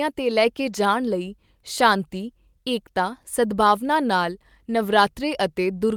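Speech recording, no technical faults detected anywhere in the clip.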